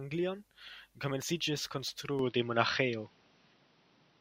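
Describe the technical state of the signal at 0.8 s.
At 0.8 s the speech signal is intact, with no audible fault at that moment.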